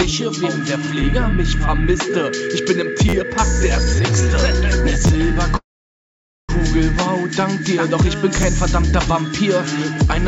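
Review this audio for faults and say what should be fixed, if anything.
Repeated buffer at 3.09 to 3.14 s, 5.07 to 5.10 s and 8.43 s: a piece of about 11.6 ms, which fits a 512-sample buffer, replays four, two and one extra times with hard joins, heard as brief stutters or buzzes because fresh audio arrived late. Giving the audio callback more headroom, with a larger buffer or higher thread priority, would prevent it.

Call audio freeze at 5.57 to 6.51 s: the sound stretches into a fading tail and then about 0.86 s of silence, likely because delayed packets drained the jitter buffer. The audio then resumes where it stopped, so nothing is missing, but everything after it is about 0.92 s late. A steadier network or a deeper adaptive jitter buffer would prevent it. The G.722 call path's cutoff at 8 kHz is expected for that codec.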